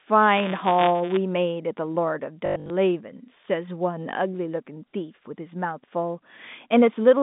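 From 0.37 to 1.18 s the speech carries buffer tearing: the write and read positions cross inside each period, so a small slice, roughly 2%, of every buffer replays audio about 20 ms old. The hard joins repeat at 172 Hz, a robotic buzz that fits a 256-sample buffer.

Between 2.46 and 2.70 s, packet loss with the last packet repeated removes 180 ms scattered across 240 ms, the longest gap 100 ms. The receiver loops the previous packet, and the runs stutter, which points to about nine 20 ms packets lost.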